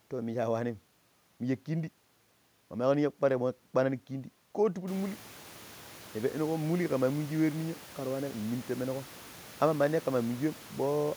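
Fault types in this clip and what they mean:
Nothing's wrong with this speech recording as far as the system goes: the room noise that picks up by about 18 dB around 5 s belongs to the room itself and still sits about 23 dB under the speech.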